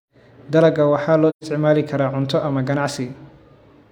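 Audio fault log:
1.29–1.44 s, AAC frame loss with muting: the speech fades into a gap of about 128 ms and fades back, which fits roughly three consecutive frames going missing. The decoder zeroed the spectrum for the lost frames, and the overlapping transform windows on either side taper the sound down and up rather than chopping it. On a spectrogram this is a full-band vertical blank with soft edges; on the waveform, the envelope narrows smoothly to silence and widens again.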